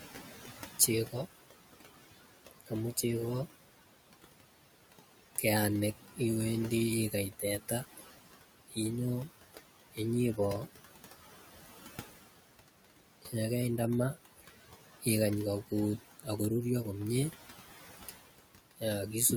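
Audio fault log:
throughout, noise suppressor artifacts: the room noise, sitting about 14 dB under the speech, sinks between phrases and swells beneath them, as steady-noise bands are pulled down by about 16 dB frame by frame.
2.51–3.03 s, 7.11–10.38 s, 13.22–16.4 s, 17.31–18.83 s, speech cut by the noise suppressor: soft consonants and word endings sound swallowed, dropping by up to about 15 to 16 dB, because the suppressor treated them as noise. This affects roughly a tenth to half a second in each span.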